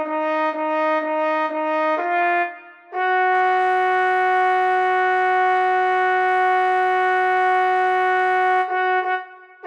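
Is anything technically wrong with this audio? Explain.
Yes. From 4.76 to 6.29 s there is channel delay, producing comb filtering. One channel arrives late by a single sample or so, about 0.02 ms. When the two channels are summed to mono, shared content cancels where the delay equals half a cycle. With so tiny an offset, the first notch sits near 20 kHz, at the very top of the band. The sound loses some air and turns slightly dull during that stretch.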